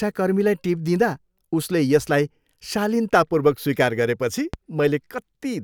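A speech clip with a single loud pop from 4.54 to 4.57 s, a sharp spike around 10 dB above the speech, which keeps going underneath it. It's likely a voltage transient, something like a plug, switch or static discharge getting into the chain.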